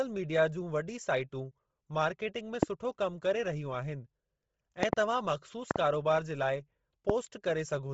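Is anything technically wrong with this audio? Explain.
Yes, two things. Throughout, the speech sounds grainy and breathy with nothing above 7.7 kHz, likely Bluetooth LC3 compression squeezed to around 24 kbps with 7.5 ms frames, filling the stripped highs with noise.

There are also loud pops: single ones at 2.63–2.65 s and 7.10–7.12 s (right after "जे लाइ"), and doubled ones at 4.83–4.95 s and 5.71–5.78 s. These are sharp thumps about 20–25 dB above the speech, which carries on underneath. They're likely voltage spikes from a switch, static or a driver glitch.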